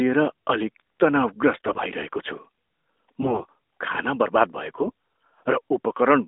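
AMR bit errors strike at 1.54 to 1.83 s, 3.22 to 3.50 s and 4.82 to 4.92 s. Roughly one bit in ten of the less protected bits arrives flipped, misplacing excitation pulses and skewing fine pitch, gain and spectral values. The speech keeps its pitch and loudness but turns hoarse, scratchy and gargly.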